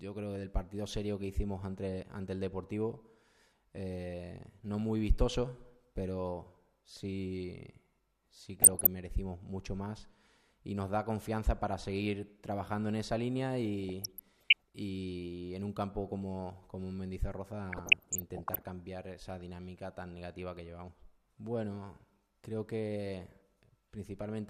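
The audio has DAB burbling in three bursts, at 8.59 to 8.87 s, 13.83 to 14.62 s and 17.72 to 18.65 s. Weak reception lets bit errors slip past error correction. Corrupted scale factors make single sub-bands jump in level for up to a frame.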